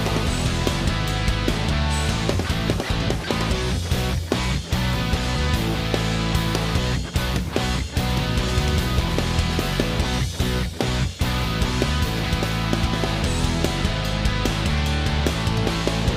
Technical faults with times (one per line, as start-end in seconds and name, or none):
none